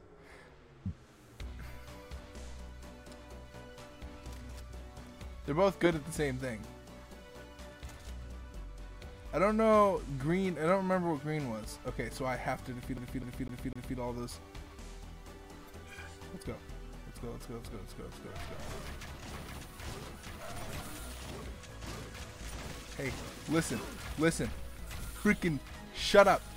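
From 12.97 s to 13.98 s, a single quarter-second slice of sound plays four times in a row, each pass cut off by a tiny mute before it restarts, giving a quick, perfectly even stutter. This is the CD stuck on one turn fault: a scratch knocks the laser back one track at the same point on every rotation, so the same 252 ms loop repeats until the player finally reads past the damaged spot.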